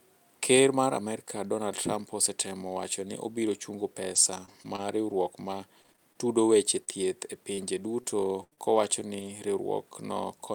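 From 4.15 to 6.17 s, between "wacho ni obiro chungo" and "tudo weche", there is repeated packet loss, with a robotic sound. Eight short gaps occur, the longest 22 ms, about 160 ms missing in all. Each gap is patched by stretching the last sound, roughly a fifth of a second of filler. The result is choppy.

At 6.77 s, after "tudo weche", one 20 ms packet is lost and rebuilt from error correction. The next packet carried a low-bitrate copy, so nothing drops out. The frame just sounds briefly rougher and noisier.

Right after, from 6.85 to 6.89 s, comes a short concealed packet loss. About 20 ms never arrived. The decoder filled it by continuing the prior sound, then blended back. It is heard as a brief smear or wobble.

At 7.01 s, still after "tudo weche", another 20 ms packet is rebuilt from error correction. Again there is no gap, only a brief grainy patch.

From 7.55 to 9.27 s, repeated packet loss returns. 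There are four gaps this time, about 160 ms missing. The longest is 77 ms.

At 9.91 s, a final 20 ms packet is rebuilt from error correction. It gives a short rough, noisy moment with no dropout.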